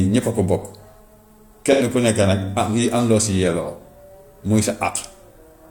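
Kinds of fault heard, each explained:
AAC frame loss with concealment: from 1.72 to 1.83 s, a brief smeared, noisy patch as the decoder refills about two lost frames from the last good spectrum.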